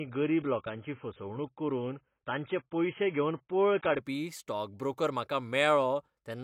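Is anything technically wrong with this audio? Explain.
Yes. From 0.0 to 4.0 s, just before "स्टॉक ब्रोकर म्हाका", the speech shows an adaptive stream starting at a low bitrate. It is dull, with nothing above 3.8 kHz, which points to a very low AAC rate. It then jumps cleanly to full bandwidth with no gap, unlike a dropout.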